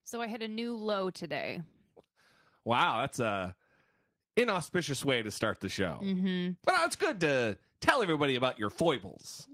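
Right from 0.1 s up to about 1.61 s you can hear automatic gain rising: the level control decided the input was too quiet and kept nudging its gain upward, ending about 7 dB higher. Because it's boosting the whole signal, the speech and the background noise swell together over that second and a half, so it sounds like someone slowly turning up a fader rather than the talker getting louder.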